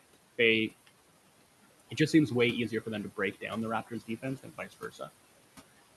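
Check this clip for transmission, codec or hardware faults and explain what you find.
Two kinds of fault are audible, both from the noise suppressor. The room noise underneath, about 17 dB below the speech, and the call codec's top end, which stops near 12 kHz, are not faults.

Noise suppressor artifacts run through the whole clip. The suppressor pulls down bands it judges to be steady noise, here by about 17 dB, so the background dips in the gaps and returns under speech. A spectrogram shows blotchy, pumping noise floor between phrases.

Speech cut by the noise suppressor occurs twice. From 3.17 to 3.51 s, right after "easier for them to", roughly a tenth of a second of speech sinks by up to about 12 dB. From 3.87 to 5.09 s, around half a second drops by up to about 15 dB. In both places the suppressor mistook quiet speech energy for noise, and it sounds swallowed or faint. The waveform shows abrupt level hollows, and the spectrogram shows missing low-level detail.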